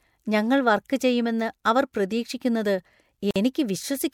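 At 3.31 s, right after "വർക്ക് ചെയ്യുമെന്ന് അവർ പ്രതീക്ഷിക്കുന്നത്", a gap at a join of encoded pieces cuts the speech for about 50 ms. Encoder delay and end-frame padding were left untrimmed.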